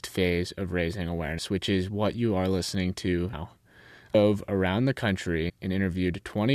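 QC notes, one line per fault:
1.37 s, 3.32 s, 4.14 s, 5.48–5.50 s: compressed frames skipped. After "phase of raising" and "what you are listening", whole frames drop out, and roughly 0.1 to 0.4 s of speech vanishes in steps that fit a 23 ms frame. The waveform shows splices where the audio jumps ahead.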